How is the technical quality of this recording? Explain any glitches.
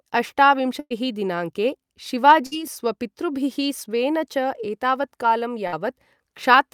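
The recording is marred by three bursts of packet loss, at 0.79 to 0.92 s, 2.46 to 2.53 s and 5.67 to 5.74 s. Consecutive packets went missing, so the receiver stretched the last speech it had and faded it down. The first gap is 110 ms of held, decaying sound, ending in 30 ms of silence; the other two are 50 ms each. Each time the speech resumes further on, skipping about 120 ms, then 60 ms twice.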